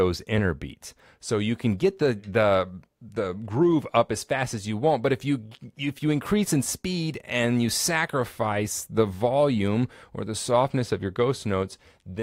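No technical faults are audible.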